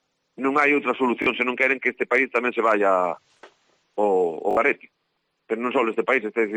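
Bluetooth stutter at 1.22–1.26 s and 4.51–4.57 s: late packets make a short slice repeat as a buzz. Unlike a silent dropout, the sound then resumes further on, skipping about 41 ms and 61 ms.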